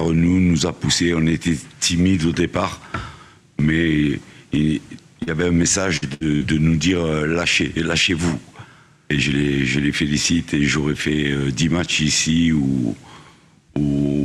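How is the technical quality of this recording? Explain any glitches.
The recording has a cluster of transmission dropouts between about 5.2 and 6.4 seconds, and they account for its audible glitches.

Short concealed packet loss occurs at 5.23 to 5.29 s and again at 6.36 to 6.43 s. About 40 ms of audio failed to arrive each time. The receiver patched the hole by extending the preceding sound for roughly 32 ms and 41 ms before blending back into the real signal. The result is a brief smear or wobble rather than an obvious gap, and a very short sound at that spot can disappear.

A burst of packet loss hits twice, at 5.97 to 6.04 s and at 6.14 to 6.22 s, each time taking out about 60 ms. Here the concealment ran longer, around 53 ms and 65 ms, and faded as it went. The sound turns into a held buzz or a dying hiss before jumping ahead with material missing. That fade and skip is what separates these from the quicker short patches around them.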